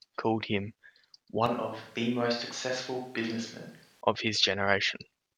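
At 1.46 s the speech turns abruptly roomy and hollow, with thinner low end, and stays that way until 4.01 s, when the close, full sound returns just as suddenly. This is a switch to a distant microphone, likely because the close mic's signal dropped out and a farther pickup took over. Across that span the level falls by roughly 5 dB, and room noise rises to around 30 dB below the speech.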